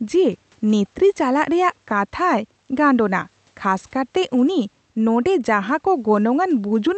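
Nothing in this speech clip goes wrong: it comes through an Opus call path that limits the audio to about 8 kHz, and the room noise sits about 41 dB below the speech.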